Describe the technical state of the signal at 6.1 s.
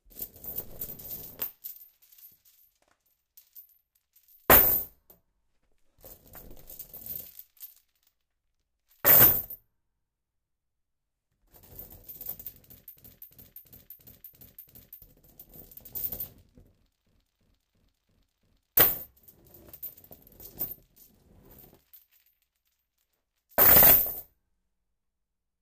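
At 6.1 s the audio is intact, with no technical fault at that moment.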